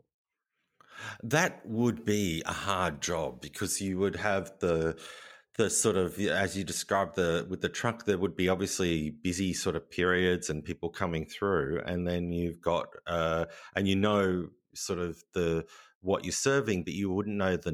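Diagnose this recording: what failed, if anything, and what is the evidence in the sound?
Pre-emphasis left on from 1.15 to 3.88 s, ending just before "would have the the": the treble is lifted about 8 dB at 10 kHz relative to 1 kHz, so the speech turns thin, bright and sibilant. The tilt fits the CD 50/15 µs curve, with the matching de-emphasis skipped at playback.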